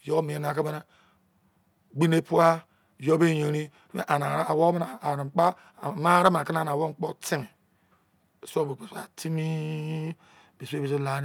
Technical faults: none

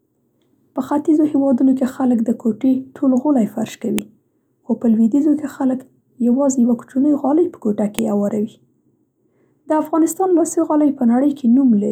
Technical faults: file header played as audio

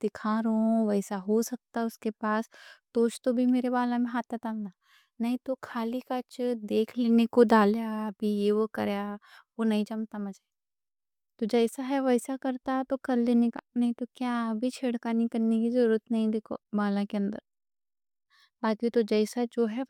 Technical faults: none

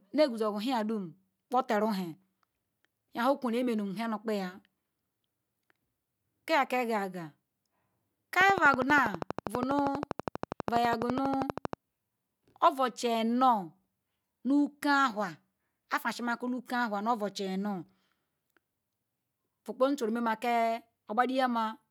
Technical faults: train of clicks

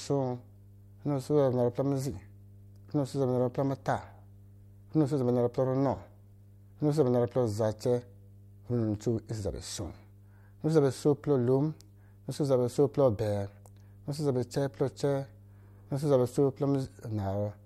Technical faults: mains hum

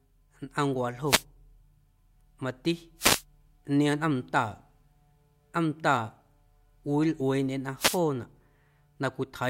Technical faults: wireless microphone noise hit

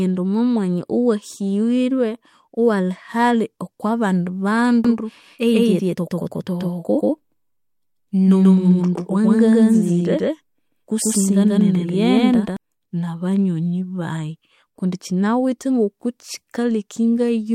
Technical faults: doubled audio track

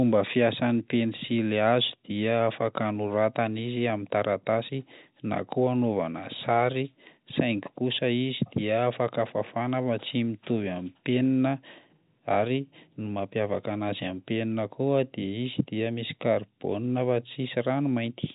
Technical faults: none

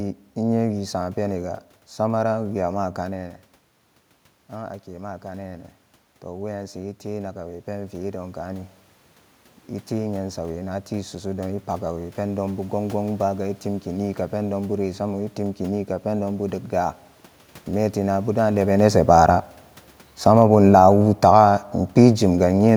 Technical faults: automatic gain falling

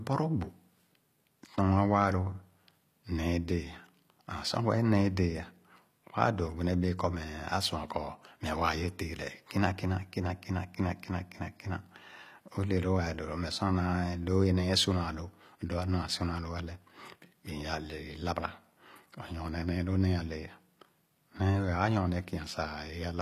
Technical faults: HE-AAC compression

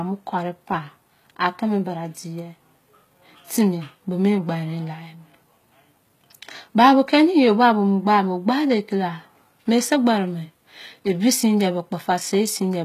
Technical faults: HE-AAC compression

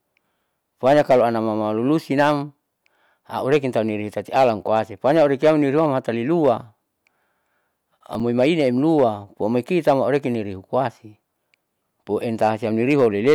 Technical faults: hard clipping; processor overload crackle

